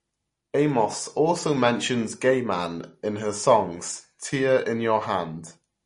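Throughout the speech, nothing survives above 10.6 kHz and the sound turns watery and swirly, which points to likely MP3 compression at a low bitrate near 40 kbps. A spectrogram shows a flat ceiling at 10.6 kHz, with patchy, flickering gaps below it.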